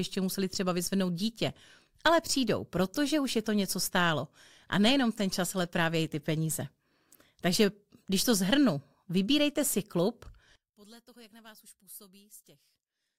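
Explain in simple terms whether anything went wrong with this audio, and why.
Right after "zhrnu vybírejte si klub", from 10.56 s to the end at 13.19 s, the speech collapses into a faint shadow. The likely cause is one channel inverted: one stereo side is flipped, so combining both into mono cancels what they share.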